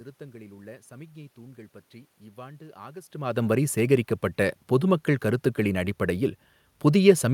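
No technical faults are audible.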